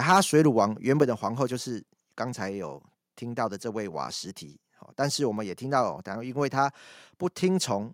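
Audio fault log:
0.09–0.6 s, microphone overload: input gain likely set too high, pushing peaks about 6 dB past the converter's limit; a small fraction of samples are flattened, giving the loudest moments a crackling edge.
1.02 s, microphone volume stepped down: the input level was likely cut in one step by about 4 dB, so the speech and background drop together at once.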